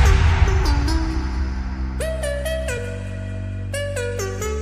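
At 0.47 s and again at 2.77 s there's a quick blip from damaged data in the compressed stream. Bad bytes made the decoder misread those frames and lose sync until it found the next frame header.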